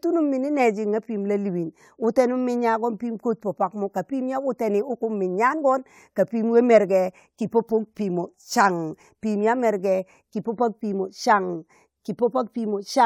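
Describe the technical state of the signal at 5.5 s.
At 5.5 s the speech signal is intact, with no audible technical fault.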